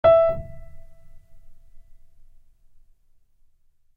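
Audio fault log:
No technical faults can be heard in this recording.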